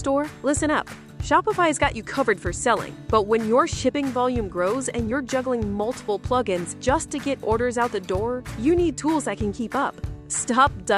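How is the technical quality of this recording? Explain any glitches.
No audible glitches or faults.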